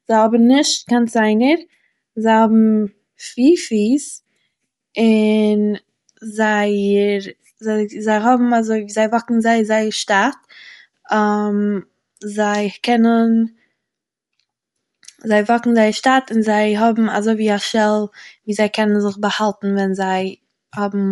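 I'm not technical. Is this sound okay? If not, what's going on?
No, not quite. The whole way through, the speech has a breathy, grainy edge, and the crisp top end stops short at around 11.5 kHz, so it sounds dull and fizzy rather than clear. That's most likely Bluetooth LC3 compression, the squeezing that wireless earbuds and headsets do. It chops the sound into tiny 10 ms slices, throws away some of the fine detail, and patches the gaps with soft hiss.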